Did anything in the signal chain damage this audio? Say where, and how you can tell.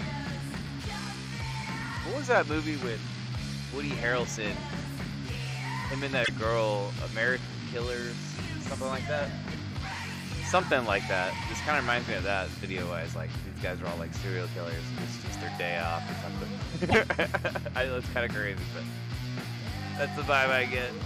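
Yes. There are two brief stutters, at 6.23 s and 16.89 s, where a sliver of sound plays twice in a row. Each repeated block lasts 26.1 ms and adds that much time to the audio, which fits a single compressed frame, probably an MP3 frame. These are repeated frames at the codec or storage stage: the same encoded frame was written or delivered twice, so the decoder simply played it again.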